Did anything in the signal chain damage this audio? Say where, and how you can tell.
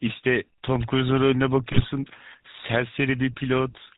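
Yes. The damage starts at the codec stage. The whole clip carries a plainly audible GSM full-rate codec sound, which fits a 13 kbit/s stream. Nothing reaches above 4 kHz. The voice has a buzzy, gravelly roughness. The codec rebuilds speech from a vocal-tract model driven by sparse, regularly spaced pulses.

The network stage adds GSM bit errors from 1.72 to 1.87 s. The speech turns into a brief garbled burst there. Its length fits about seven 20 ms frames. Bits flipped on a weak link corrupt the decoder's filter, pitch and gain values, which distorts the spectrum and level.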